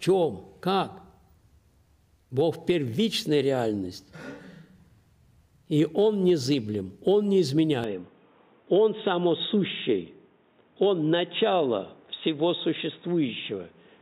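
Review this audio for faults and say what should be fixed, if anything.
From 7.84 s to the end the sound turns dull and boxy, likely an input switched to a poorer device. A spectrogram shows everything above 3.8 kHz vanishing abruptly, with a faint new noise floor, while the waveform level stays steady. Lock the input device before recording.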